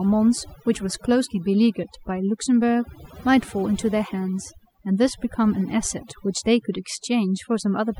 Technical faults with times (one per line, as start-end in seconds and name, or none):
0.00-7.99 overdone noise removal